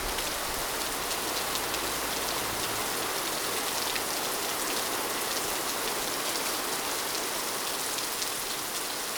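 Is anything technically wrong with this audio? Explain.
No, nothing technically wrong can be heard here.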